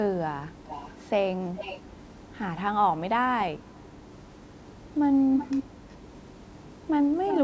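Echo leak at 0.64 to 1.04, 1.56 to 1.9, 2.06 to 2.26, 3.72 to 3.87, 5.38 to 5.67, 5.89 to 5.95 and 7.28 to 7.43 s: delayed copies of the speech, 416 ms later at first and then 371 ms, ranging from faint to nearly as loud as the speech. These are likely from a loudspeaker whose echo canceller missed them. On a spectrogram they show as fainter, shifted repeats of earlier harmonic patterns.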